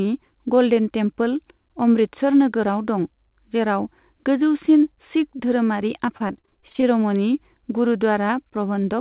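Choppy, robotic speech from 6.06 to 6.84 s comes from repeated packet loss: about a dozen short holes, none longer than 26 ms, patched by stretching the previous sound. Across the whole clip, nothing reaches above 4 kHz, which fits a narrowband call codec such as G.711.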